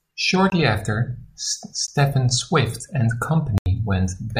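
Three blocks of digital silence cut into the speech: 0.50 to 0.52 s (20 ms), a single one at 1.87 s (about 13 ms), and 3.58 to 3.66 s (80 ms). In each, a run of samples drops out to silence and then resumes with no fade. The 13 ms gap registers as a tick, while the 80 ms block is long enough to be heard as a distinct hole in the sound.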